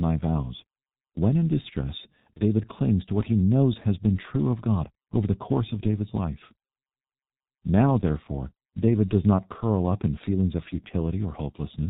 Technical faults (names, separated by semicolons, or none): G.723.1 codec; VoIP packet loss concealed by the speech codec